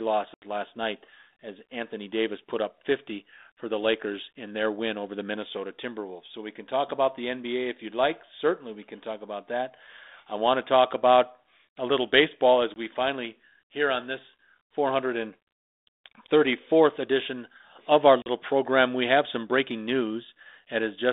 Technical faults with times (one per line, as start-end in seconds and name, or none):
0.34-0.43 packet loss on an ADPCM call
12.74-12.79 packet loss on an ADPCM call
18.22-18.29 packet loss on an ADPCM call